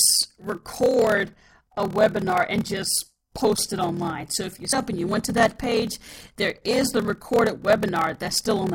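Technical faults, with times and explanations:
Throughout, block size mismatch (padded): zero-filled gaps after blocks that fit 1024 samples buzz at 38.3 Hz, slowing speech to 0.889× speed; periodic flat gaps show in the waveform.
4.72 s, damaged data in a compressed stream: between "if you" and "up and you went" the decoder loses sync.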